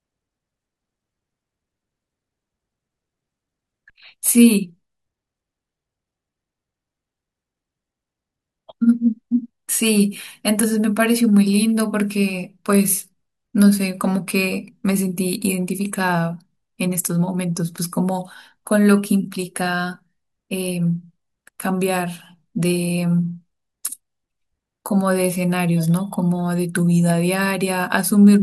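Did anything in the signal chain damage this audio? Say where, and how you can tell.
No, nothing in the chain damaged this speech.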